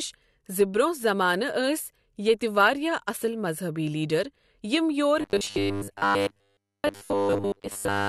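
From 5.21 s to 8.08 s the speech turns into a rigid metallic buzz at a fixed 100 Hz, the robotic sound from repeated short buffers, likely from audio arriving too seldom so roughly 10 ms slices are replayed over most of that stretch. Unlike a dropout, the gaps are filled with repeats rather than left silent.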